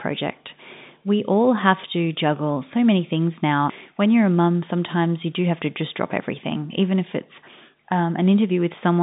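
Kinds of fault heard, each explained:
No faults heard in this recording.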